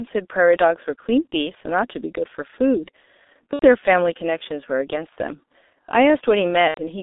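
The G.723.1 codec colours this speech clip throughout. The line band runs only from about 250 Hz to 3.7 kHz, and heavy coding damage leaves the voice muffled and hoarse with smeared consonants, which fits a 6.3 kbit/s stream coded in slow 30 ms frames. VoIP packet loss concealed by the speech codec appears at 3.53–3.66 s, 5.09–5.13 s and 6.68–6.80 s. At each gap the decoder extends its last pitch and filter with falling gain, producing a fading smear, and the voice stays weak briefly after audio resumes. The 90 ms gaps fit three lost 30 ms frames, and the shorter one fits a single lost frame.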